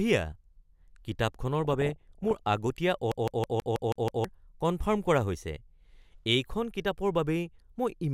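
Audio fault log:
1.60–2.40 s DAB burbling: residual bit errors, well under one percent, corrupt sub-bands frame by frame, heard as squelchy bubbling chirps and seen as scattered blocky spectrogram patches.
3.12–4.24 s CD stuck on one turn: a 0.16 s slice repeats seven times with short mutes, a fast even stutter, and the waveform shows identical blocks split by tiny gaps.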